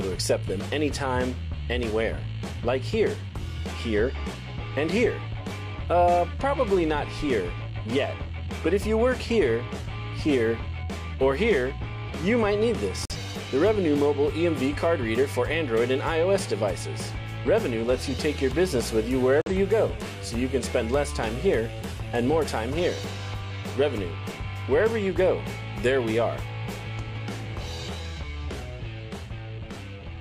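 At 13.05 s and again at 19.42 s the audio drops abruptly into silence for roughly 0.1 s each, which is corrupt frame muted. Damaged compressed frames failed to decode and were replaced with silence, so the gaps cut in sharply while timing stays intact.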